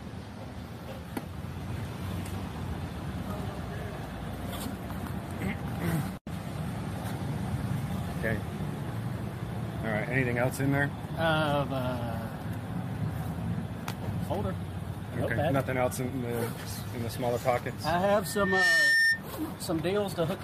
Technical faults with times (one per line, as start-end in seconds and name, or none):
18.22-19.22 loudspeaker feedback squeal